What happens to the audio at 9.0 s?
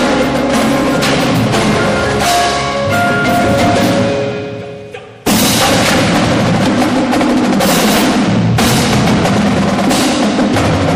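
At 9.0 s the audio sounds watery and swirly, with a plainly audible metallic chirping on bright, hissy content and softened attacks. This runs through the whole clip, not just this moment. The likely cause is MP3 compression at a starved bitrate, in a way that fits about 64 kbps: the encoder zeroes quiet frequency lines that flicker on and off between frames.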